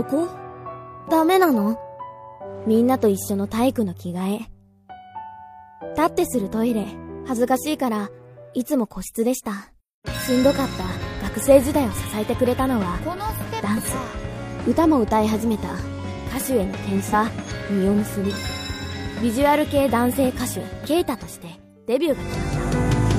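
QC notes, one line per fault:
17.09–17.14 s and 20.81–20.86 s: damaged data in a compressed stream. Two brief faults of about 50 ms each break into the sound. At these points the compressed data is corrupted, through lost, zeroed or overwritten bytes, so the decoder cannot read those frames correctly. It loses sync and hunts for the next valid frame header.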